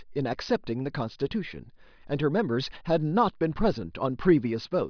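Nothing in the recording points to a technical problem, and the signal stays steady and intact from its opening moment to its close.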